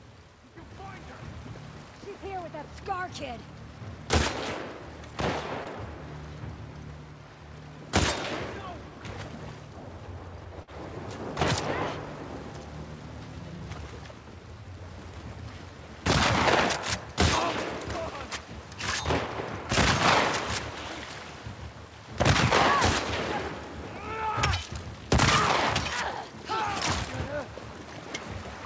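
Short concealed packet loss at 5.64 to 5.67 s and 10.63 to 10.69 s: about 20 ms, then 40 ms, of audio arrived too late, and the receiver extended the preceding sound to cover each gap, leaving brief smeared wobbles. The call codec passes nothing above 8 kHz.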